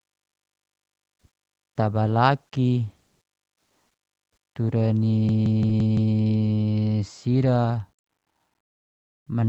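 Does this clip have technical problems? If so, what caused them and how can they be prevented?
Yes. From 5.29 to 6.14 s there's a system hang loop. The computer or driver froze and the hardware replayed the same 171 ms chunk five times, giving a machine-gun stutter at about 5.9 Hz, which fits an 8192-sample ring buffer. Giving the audio thread real-time priority, plus a watchdog that mutes the output when the buffer stops refilling, would prevent it.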